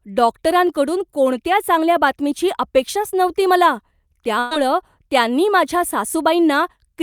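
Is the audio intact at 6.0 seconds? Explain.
Yes, at 6.0 seconds the speech plays through cleanly with no audible fault.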